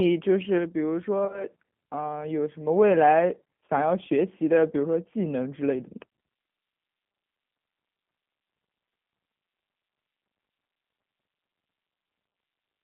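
From start to finish the speech sounds thin, slightly rough and synthetic, confined to a band from about 150 Hz to 3.4 kHz with nothing above. The damage is plainly audible. This is the G.729 codec at work, which fits an 8 kbit/s G.729A stream. It does not carry the waveform itself. It rebuilds each 10 ms frame from a vocal tract filter, a pitch predictor and a handful of pulses, and that coarse reconstruction gives the voice its grainy, artificial edge.

Between 1.25 and 1.45 s the voice turns briefly buzzy and smeared, dipping and recovering in short bursts. This is VoIP packet loss concealed by the speech codec. About 50 ms of audio went missing, scattered across roughly 80 ms, with no gap longer than 20 ms. Each time, the decoder stretched its last pitch and filter to fill the hole, and it took a moment to settle once real frames resumed. A second, shorter concealment at 3.66 to 3.69 s covers two lost frames, 20 ms in all, and is heard as a quick tonal blur.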